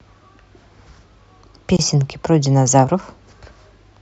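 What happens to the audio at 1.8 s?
At 1.77 to 1.79 s the speech drops out for about 24 ms: a gap at a join of encoded pieces, where separately encoded segments were spliced with their start delay and end padding left in. It sounds like a brief tick of silence before the speech resumes where it stopped. On a waveform or spectrogram it appears as a thin blank vertical stripe with slightly smeared edges.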